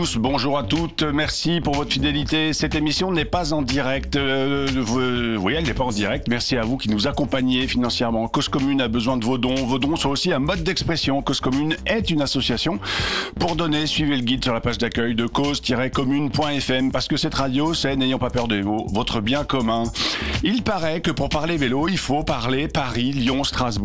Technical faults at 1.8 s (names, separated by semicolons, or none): none